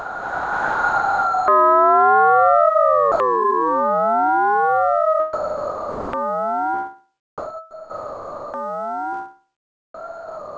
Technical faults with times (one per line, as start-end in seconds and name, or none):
0.00-1.48 sound dropped by the voice detector
3.12-3.20 sound dropped by the voice detector
5.33-6.13 sound dropped by the voice detector
7.38-8.54 sound dropped by the voice detector
9.94-10.57 sound dropped by the voice detector